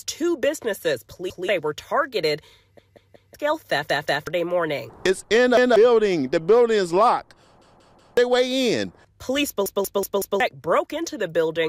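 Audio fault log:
1.30–1.49 s, 2.79–3.34 s, 3.90–4.27 s, 5.57–5.76 s, 7.62–8.17 s, 9.66–10.40 s: repeated buffer. When fresh audio arrives late, the output replays its last block, about 186 ms long, which fits an 8192-sample buffer. Each block is heard again 1, 3, 2, 1, 3 and 4 times, giving stutters with a hard join at every repeat. The real audio that should have played is skipped, from roughly a fifth of a second to nearly three quarters of a second.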